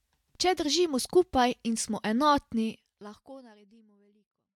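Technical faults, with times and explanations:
Nothing stood out on listening; the smooth fade-out in the last couple of seconds is an ordinary edit.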